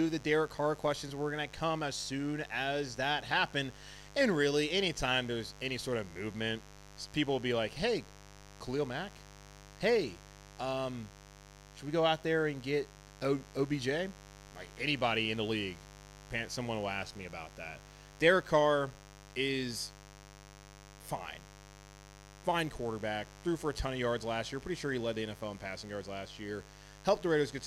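From start to finish, a mains buzz sits under the speech, roughly 20 dB below it. Sharp spikes twice per 50 Hz cycle give a raspy, harmonic-rich edge reaching into the kilohertz range, unlike the smooth, low tone of plain hum.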